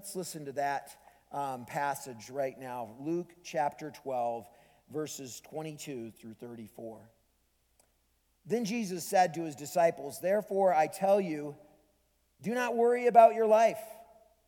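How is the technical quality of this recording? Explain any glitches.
No glitches or technical faults can be heard here.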